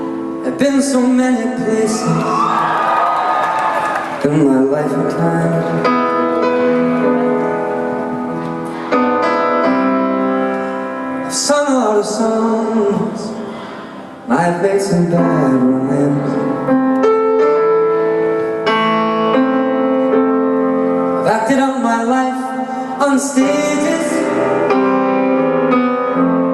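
Nothing in the audio stood out as a technical problem on listening.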